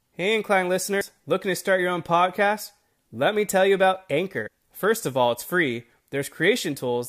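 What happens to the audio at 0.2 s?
At 0.2 s the speech carries on intact, with no audible fault at that moment.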